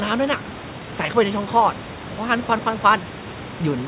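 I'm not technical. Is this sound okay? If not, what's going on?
Yes, nothing stood out as a problem when listening to this speech recording.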